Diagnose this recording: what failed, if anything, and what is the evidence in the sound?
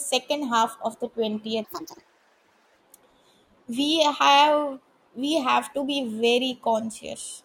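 Section at the wrong speed, 1.65 to 2.79 s: speech runs 1.68 times fast, roughly ten semitones higher, likely from playback on the wrong clock.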